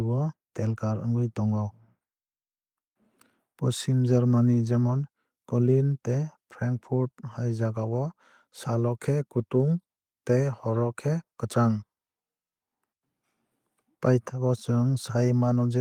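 A speech recording with no audible technical faults.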